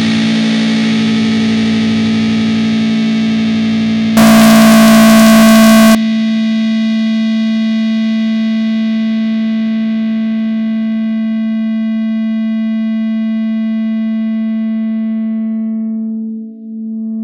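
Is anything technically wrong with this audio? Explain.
Yes. From 4.17 to 5.95 s there's a float read as integer fault. The 32-bit float samples were likely read as 32-bit integers, so sign and exponent bits set the level. The result is a loud, near-square, harsh blast at an almost fixed level, with background noise as loud as everything else.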